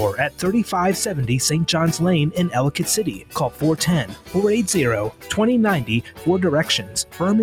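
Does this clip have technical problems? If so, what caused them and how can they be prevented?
Yes. A speech noise suppressor was left on the audio. It treats steady tones and tails as noise, so the level swings by around 10 dB. Turn the suppressor off for non-speech material.

The sound is cut by the noise suppressor at 3.09–3.63, 4.04–4.35, 5.11–5.34, 6.02–6.27 and 6.81–7.21 s. Held parts sink by up to about 11 dB. Bypass suppression or lower its strength.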